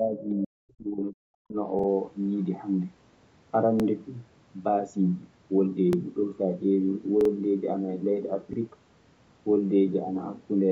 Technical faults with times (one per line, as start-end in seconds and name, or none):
0.00-1.57 speech suppressed in double talk
1.79-1.88 repeated buffer
3.80-3.84 repeated buffer
5.93-5.97 repeated buffer
7.21-7.30 repeated buffer
8.53-8.58 repeated buffer